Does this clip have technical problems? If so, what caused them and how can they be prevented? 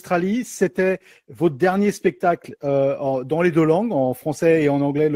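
Yes. From 0.46 s to 4.83 s the sound turns rough and muffled, loses its top end, and stays coarsest for about 2.1 s. This is a call bitrate drop, consistent with the encoder falling from roughly 96 kbps to 16 kbps after the bandwidth estimate collapsed. Prevent it with a steadier, less congested network connection.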